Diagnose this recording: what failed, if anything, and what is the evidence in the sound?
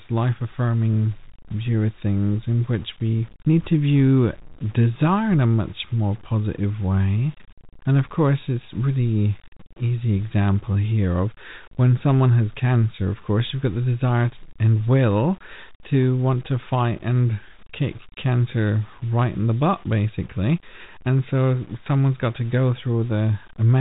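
Grainy, level-following grit runs through the whole speech, about 30 dB down and roughest on quiet tails. That's low bit depth without dither at the sample-format conversion stage, likely truncation to roughly 7 bits, so the error tracks the signal instead of sitting as steady hiss.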